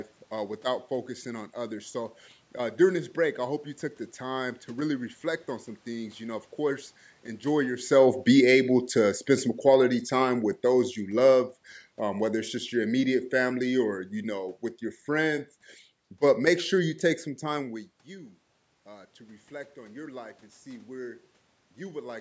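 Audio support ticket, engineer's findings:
Automatic gain falling, 6.58 to 15.41 s. Level sinks about 11 dB over roughly 9 s, voice and background dropping together. Component: call AGC. Mechanism: input too loud, or background noise too strong, for the starting gain, with the talker moving around 7.5 s. The AGC pulled gain down slowly rather than at once.

Automatic gain rising, 18.06 to 22.16 s. Voice and room noise swell together, about 5 dB of gain added over about 4 s. Component: call AGC. Mechanism: input fell about 18 dB, fitting the talker moving back around 17.5 s. The AGC compensated only partly, lifting the noise floor along with the voice. Band tops out at 8 kHz, which points to a 16 kHz call path.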